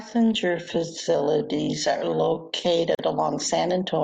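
Speech that drags from the start to 2.82 s, with the pace slowed to about 0.6 times while pitch holds: likely a time-stretched section. At 2.95 to 2.99 s, a 40 ms gap cuts the sound, which then resumes where it stopped: a gap at a join of encoded pieces, where encoder delay and end padding were left in.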